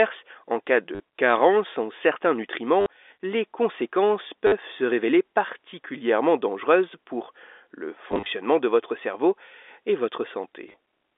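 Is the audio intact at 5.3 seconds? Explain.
Yes, the speech at 5.3 seconds is intact, passing through the ordinary G.711 telephone coding with no fault at that moment.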